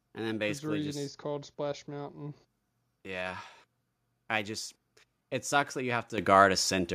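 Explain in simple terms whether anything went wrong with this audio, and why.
Microphone volume stepped up at 6.18 s, just after "it sucks that you": the calling software judged the microphone too quiet and turned its input level up in one sudden step, so the voice and the background noise both jump louder together.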